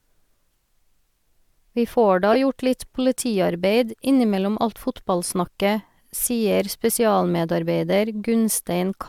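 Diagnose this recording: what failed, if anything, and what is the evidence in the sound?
Codec stage: a corrupt frame was decoded. A loud glitch at 2.33–2.36 s, between "får da" and "gjort litt politiarbeid innimellom", and a fainter one at 5.45–5.48 s, each spanning a couple of frames. Damaged bits were decoded anyway, putting brief bursts of energy at the wrong frequencies on a spectrogram.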